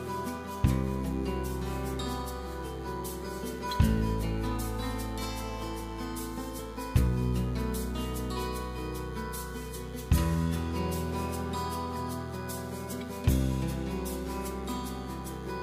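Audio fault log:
Throughout: DECT cordless phone buzz. A nearby DECT handset or base emits a radio burst every 10 ms, which the audio circuitry rectifies into a thin, steady buzz at 100 Hz with a dense ladder of harmonics, sitting roughly 25 dB below the sound.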